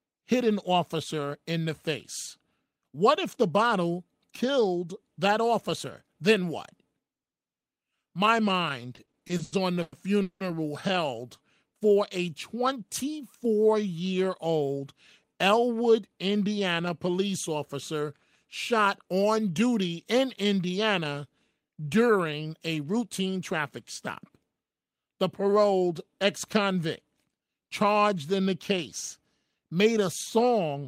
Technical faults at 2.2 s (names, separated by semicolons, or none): none